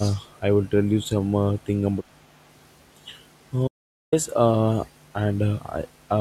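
A short speech recording with four faults. Right at the start, from 0.0 to 0.1 s, the voice dips sharply, by roughly 20 dB at its deepest, for about a tenth of a second. This is speech suppressed in double talk. The likely cause is an echo canceller that heard both ends talking at once. It could not tell the near voice from loudspeaker echo, so it pulled the level down on everything. Between 0.25 and 0.4 s, a faint delayed copy of the voice comes through. It trails the original by 408 ms and sits very low, around 40 dB under the speech. This is an echo leak. It likely comes from a far end playing the call on a loudspeaker, with its echo canceller failing to remove all of what the microphone picked up. That residue was sent back down the line. From 0.65 s almost to the end, at 6.06 s, the voice collapses by about 28 dB. What is left is a faint copy. This points to one channel inverted. One stereo channel likely has its polarity flipped. 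When the two channels are summed to mono, the centred voice cancels itself, leaving only the small difference between the sides. From 3.68 to 4.12 s the sound stops dead for about 0.45 s. There is silence, with no room tone at all. This is an audio dropout to silence. The input was likely lost briefly while the recorder kept writing silence, so whatever sounded in that gap is gone.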